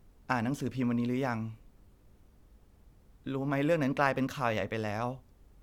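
No technical faults are audible anywhere in the speech recording, and nothing in the signal calls for comment.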